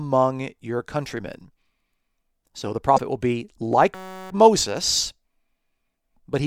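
At 2.94 to 3.00 s, just before "will be like", a brief glitch cuts across the speech. This is damaged data in a compressed stream: corrupted bytes made the decoder misread those frames and lose sync until it found a valid frame header again.

From 3.95 to 4.30 s, right after "will be like", the sound turns into a steady buzz at about 188 Hz. This is a system hang loop. The driver stalled while the hardware kept replaying one 5.33 ms slice, which fits a 256-sample buffer, with almost no audio lost.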